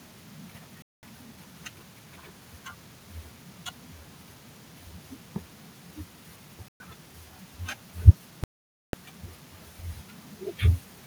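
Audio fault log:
0.82–1.03 s, 6.68–6.80 s and 8.44–8.93 s, Bluetooth stall: the speech drops to dead silence for about 0.21 s, 0.12 s and then a long 0.5 s before carrying on. That's likely the headphones' buffer running dry while delayed wireless packets were resent.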